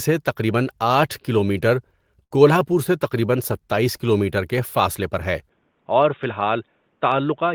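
At 2.23 s there's a short stall from a late packet. The jitter buffer ran dry, so the receiver held the last bit of speech for about 75 ms, until 2.33 s, then picked up where it left off. Nothing's lost, just a slightly stretched sound.

From 5.49 s to the end, the sound suddenly goes dull and boxy, with nothing above 3.7 kHz, a drop of about 5 dB, and a new noise floor roughly 45 dB down. There's no gap at the change. That's most likely the input switched to a poorer device.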